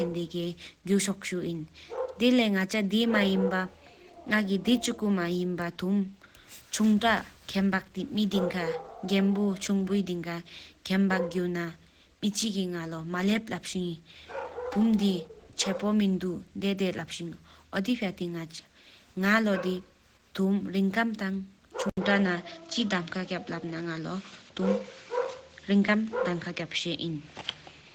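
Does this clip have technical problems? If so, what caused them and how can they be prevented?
Yes. Throughout the speech there is Opus compression, likely from a low bitrate of around 16 kbps in the encoder's hybrid speech mode. Bands are filled with noise rather than left empty, so the voice sounds grainy and hoarse instead of having MP3's swirling holes. Encoding at a higher bitrate prevents it.

At 21.9 s the input switched to a poorer device, likely a headset's call profile. An 80 ms silence comes first. After it, nothing is left above 7.6 kHz and a new noise floor sits about 35 dB below the signal, while the level stays roughly unchanged. The gap and the new noise tell it apart from a codec narrowing its bandwidth. Locking the recording input to one microphone prevents it.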